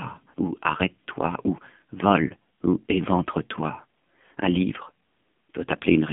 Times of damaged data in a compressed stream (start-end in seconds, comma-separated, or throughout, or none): none